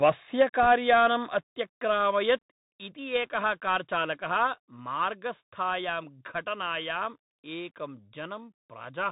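Throughout, the speech passes through the Bluetooth CVSD headset codec, and its damage is plainly audible. The codec sends a single up-or-down bit per sample at 64 kHz, with a step size that adapts, so the band stops near 4 kHz. Loud high-frequency sounds outrun the step and smear, and a grainy hiss sits under everything. Unlike a dropout or packet loss, this coloration never lets up at any point in the clip.

From 0.03 to 0.1 s, and again from 0.4 to 1.06 s, the loudest syllables take on a harsh, crackling edge. This is microphone overload, likely from an input gain set too high, so that peaks run about 5 dB and then about 4 dB past the converter's limit and a few percent of samples have their tops flattened. Unlike the codec's granular hiss, this crackle comes and goes with the level of each peak.

At 0.42 s the microphone volume is stepped down by 2 dB, likely by call software reacting to the clipping. 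Voice and background drop together in one step. Similar steps follow at 2.43 s (3 dB) and 4.47 s (2 dB). A limiter or automatic gain control would shape the level smoothly. These are instant, fixed changes in level.

Between 0.63 and 0.67 s, bit errors on a Bluetooth voice link add a brief rushing, crackly noise. The error rate is around one percent. Each flipped bit nudges the signal by one step, whose size grows with the speech level, and the effect dies away quickly, so there are no sharp clicks of the kind that corrupted packets in other codecs produce. Only a short burst of roughness sits over the overloaded passage.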